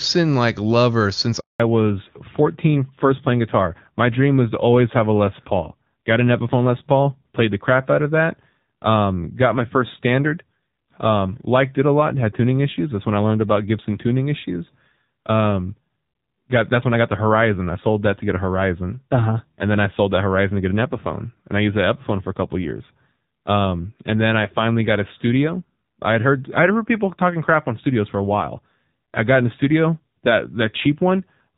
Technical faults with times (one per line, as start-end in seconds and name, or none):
1.40-1.60 handover gap
1.60-31.58 fallback to narrowband